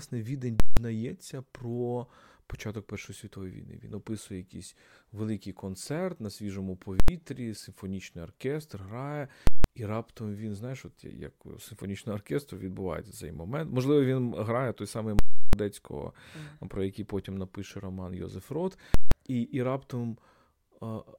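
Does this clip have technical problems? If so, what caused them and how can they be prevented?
Yes. Invalid numbers at full scale occur at 0.60–0.77, 7.00–7.08, 9.47–9.64, 15.19–15.53 and 18.94–19.12 s. A processing calculation produced infinite or invalid values, which were pinned to maximum level for a whole block. Each event is heard as a loud pop at its edges with silence between. Most last 0.17 s, while the 7.00 s event lasts 0.09 s and the 15.19 s event lasts 0.34 s. These lengths fit blocks of 8192, 4096 and 16384 samples. To prevent this, detect and replace invalid values inside the processing chain before they reach the output.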